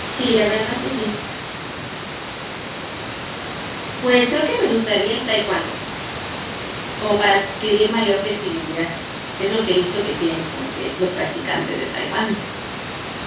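Nothing in this speech recording stood out as a fault on listening, with the room noise sitting about 11 dB below the voice and the narrow 4 kHz ceiling of the G.711 mu-law call path both heard as ordinary parts of the recording.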